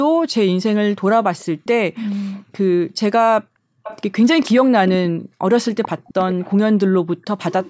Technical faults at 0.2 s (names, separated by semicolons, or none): none